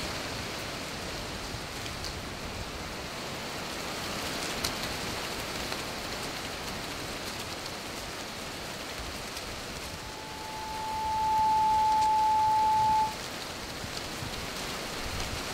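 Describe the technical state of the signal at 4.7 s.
The signal at 4.7 s is intact, with no fault audible at that point in the sound.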